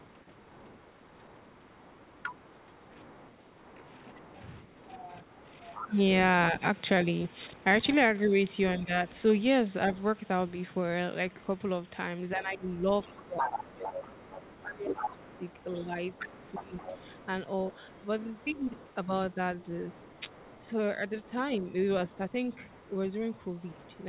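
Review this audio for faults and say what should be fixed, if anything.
The other side's voice leaking through is audible from 0.0 to 7.64 s, faint at about 30 dB below the talker, and again from 9.96 s to the end, much stronger at about 15 dB below. The far-end loudspeaker signal reaches the microphone, and the echo canceller likely failed to converge fully on that path, leaving a residual second voice in the send signal. Prevention: use a headset or improve acoustic isolation, and verify the echo canceller's reference alignment and tail length.

Speech suppressed in double talk shows up as dips in the talker's level. Between 3.0 and 8.95 s, about a second of speech in total drops by up to about 10 dB. Between 12.36 and 17.14 s, roughly three seconds in total fall by as much as about 15 dB. A short 10 dB dip runs from 23.73 to 23.83 s. With both sides active, the suppressor likely could not tell near-end speech from echo and attenuated both. 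Prevention: tune double-talk detection so the suppressor stays less aggressive while near-end speech is present.

The band limit at 4 kHz comes from the G.711 A-law path at 64 kbps, which is expected for that codec.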